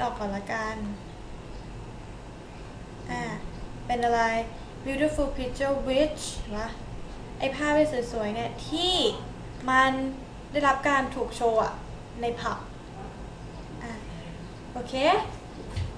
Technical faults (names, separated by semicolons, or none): none